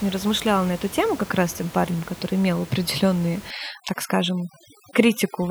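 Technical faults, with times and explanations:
3.51–5.50 s, overdone noise removal: after "парнем который имел определенные" the background drops to twinkling near-silence, because over-strong suppression cuts the room-noise bands and quiet speech detail with them.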